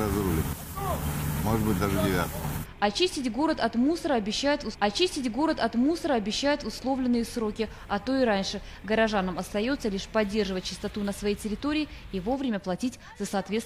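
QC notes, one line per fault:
4.69–6.69 s, stream segment repeated: about 2.0 s of audio plays a second time. The player fetched or queued the same segment twice, so playback jumps back and replays it, with a small blip at the splice where the repeat begins.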